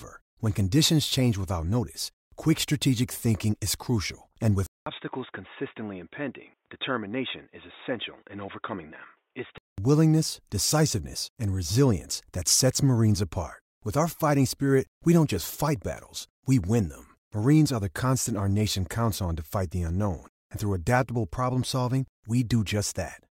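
An input switched to a poorer device from 4.66 to 9.78 s: after a 200 ms silence, the speech drops by about 10 dB. It turns boxy with nothing above 3.8 kHz, likely from a narrower-band microphone taking over, and has a low new noise floor.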